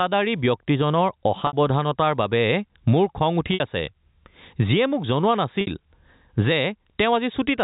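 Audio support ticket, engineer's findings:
Gain pumping, throughout. Gain swing of around 20 dB. Dynamics squashed. Likely cause: input gain set far too high, with a fast limiter or compressor pulling it down on every peak. Waveform: flattened, near-uniform envelope.

Packet loss with pitch repetition at 1.47 s, 3.54 s and 5.61 s, each about 60 ms. Brief held, buzzy tone that fades out, then the sound cross-fades back in. The receiver's concealment repeats the last pitch period, which fits two lost packets per gap. Spectrogram: frozen, perfectly flat harmonic stripes, band-limited at 4 kHz by the G.711 telephone path. Waveform: identical repeating cycles decaying in amplitude.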